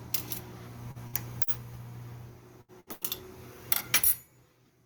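A short stall from a late packet at 0.91 s holds the sound for about 37 ms, then resumes exactly where it left off. At 1.07 s a burst of packet loss drops about 60 ms, covered by a fading continuation before the sound jumps ahead. Further stalls at 1.43 s (about 41 ms) and 2.93 s (about 92 ms) also lose nothing. More loss bursts at 2.61 and 2.80 s each skip about 60 ms. The stalls only stretch time, while the bursts leave gaps.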